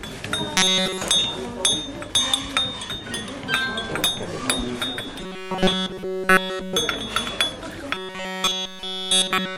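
The clip is a recording of everyday sounds with robotic sound from repeated short buffers in three stretches: 0.57 to 1.02 s, 5.20 to 6.77 s, and 7.94 s to the end. In each, the sound collapses into a rigid, metallic buzz at 188 Hz, with essentially all of the original material replaced by repeats. That pitch points to the same roughly 5.3 ms fragment being looped, likely because new audio arrived too slowly and the player filled the gaps.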